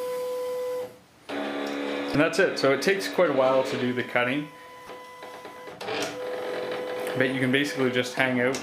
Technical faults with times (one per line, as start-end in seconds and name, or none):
2.12-2.15 damaged data in a compressed stream
4.86-4.90 damaged data in a compressed stream